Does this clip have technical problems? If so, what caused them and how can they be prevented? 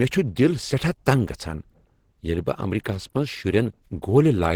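Yes. Throughout the speech, Opus compression likely forced the encoder into its hybrid speech mode, leaving a plainly hoarse, grainy texture that fits a bitrate around 16 kbps. Encoding at a higher Opus bitrate would prevent this.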